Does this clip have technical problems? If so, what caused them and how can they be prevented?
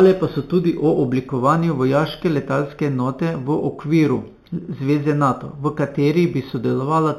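Yes. Throughout, the speech shows imaging from linear upsampling: it was raised from 8 kHz to 44.1 kHz by straight-line interpolation, which leaves mirror images in the 4 to 8 kHz band around 30 dB down, dulling the top and adding a faint metallic shimmer on sibilants. Using a proper band-limited resampler prevents this.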